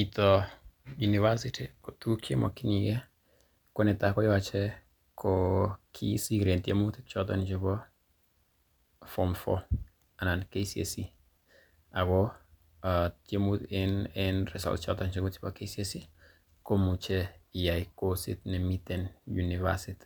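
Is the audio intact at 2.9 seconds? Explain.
Yes, at 2.9 seconds the speech plays through cleanly, with no dropout, click, distortion or other audible fault at that point.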